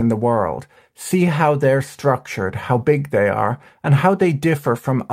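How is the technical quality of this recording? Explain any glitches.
The technical quality of this recording is sound, with no glitches to explain.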